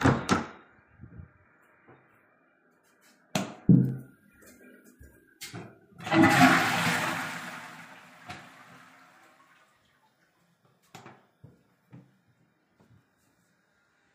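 From 2.99 to 4.01 s there's zipper noise: the level moves about 15 dB in unsmoothed 2 dB steps, roughly seven a second, so each jump ticks audibly.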